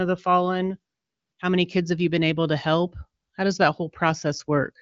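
The speech has no technical faults, and its band stops at 7.5 kHz with at most a faint coding texture, which fits the AMR wideband (HD Voice) codec running at about 23 kbit/s.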